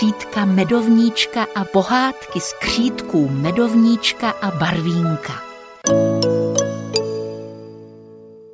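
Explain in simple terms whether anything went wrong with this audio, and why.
Nothing went wrong with this audio, so there is no problem to explain.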